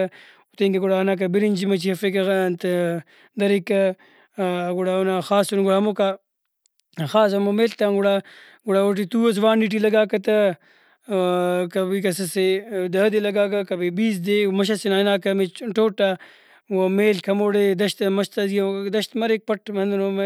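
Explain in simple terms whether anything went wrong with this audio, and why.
Nothing went wrong; the speech sounds just as it should.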